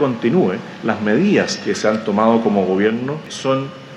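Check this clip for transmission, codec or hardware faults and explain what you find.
No transmission, codec or hardware problems can be heard anywhere in the audio; the signal stays continuous and stable throughout.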